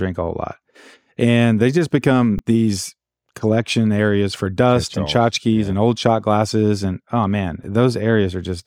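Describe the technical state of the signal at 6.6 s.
At 6.6 s the signal is intact, with no audible dropout, clipping, distortion or other technical fault at that point.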